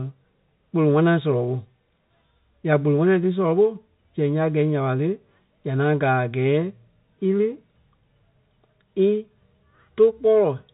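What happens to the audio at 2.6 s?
Nothing goes wrong at 2.6 s: the speech there is intact, carried by the usual G.711 telephone coding with its band ending around 3.8 kHz.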